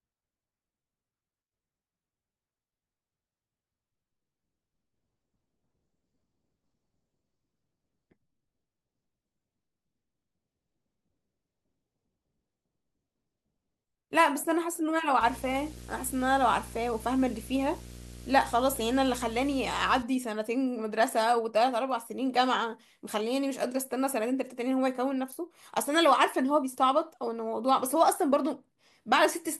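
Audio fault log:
15.2–20.03 s, video or display buzz: a screen or video cable leaks its 60 Hz field rate into the speech, giving a buzz with hash above it, roughly 20 dB down. A spectrogram shows a 60 Hz comb of harmonics; the waveform repeats every 16.7 ms.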